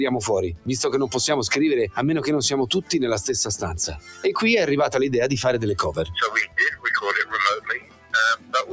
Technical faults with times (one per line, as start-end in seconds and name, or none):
0.00-8.72 hard clipping
0.00-8.72 noise suppressor applied to music or sounds
3.88-4.25 sound cut by the noise suppressor
7.61-8.72 sound cut by the noise suppressor